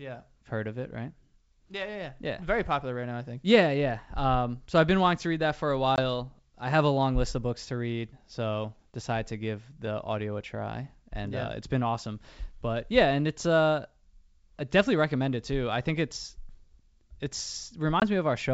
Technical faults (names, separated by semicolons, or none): packet loss on an ADPCM call